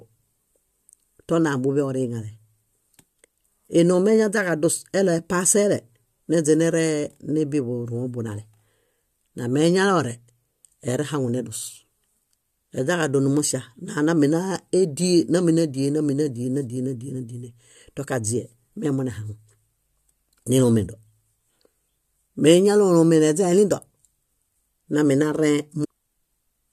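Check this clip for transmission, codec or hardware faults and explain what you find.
One fault stands out in this speech recording, near the very end, between 25.83 and 25.85 s. It is most likely a stream segment skipped. When one segment of a segmented stream fails to arrive, the player abandons it and carries straight on with the next, so a stretch of the programme never plays. What you hear is a brief blip lasting about 20 ms, after which the speech jumps abruptly ahead rather than continuing smoothly.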